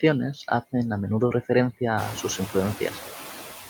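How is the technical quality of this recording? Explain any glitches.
The recording carries one system fault, present from start to finish: noise suppressor artifacts. A noise suppressor runs across the whole clip, judging frame by frame which frequency bands hold steady background noise and pulling those bands down by about 7 dB. The noise therefore sinks in the gaps between words and comes back up underneath the speech whenever the talker is active. The room noise itself climbs by about 16 dB at around two seconds, settling roughly 12 dB below the speech.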